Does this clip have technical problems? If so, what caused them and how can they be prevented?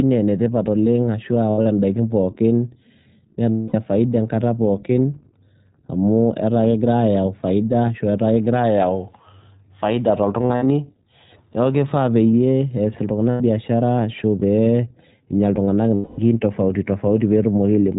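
Yes, two related problems. First, the whole clip runs through the iLBC codec, and you can hear it plainly. Everything above 4 kHz is gone, so it has that narrowband phone sound, and the speech comes out a bit rough and synthetic. That's the codec modelling each short frame's excitation on its own, at a rate that points to about 15 kbps with 20 ms frames. To prevent it, use a wideband codec such as Opus wherever both ends support it.

Second, there are lost iLBC frames in five spots. At 1.50 to 1.67 s and 10.42 to 10.66 s the losses are scattered, about 120 ms and 160 ms missing respectively, with the longest unbroken gap roughly 70 ms. Solid gaps sit at 3.50 to 3.75 s (240 ms), 13.30 to 13.41 s (100 ms) and 15.94 to 16.20 s (240 ms). In each one the decoder fills in by repeating the last pitch cycle with some noise mixed in, so you get a held, slightly buzzy vowel that fades over the longer gaps, and then the speech snaps back right away. 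To prevent it, fix the packet loss on the network path, or add forward error correction or redundancy so that lost frames can be rebuilt.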